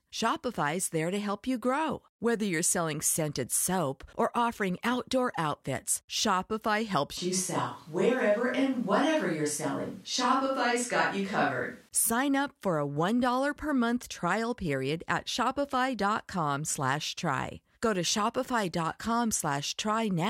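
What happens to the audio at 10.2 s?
At 10.2 s the speech is in a switch to a distant microphone, from 7.18 to 11.89 s. It turns roomy, hollow and thin at once, likely because a farther microphone replaced the close one.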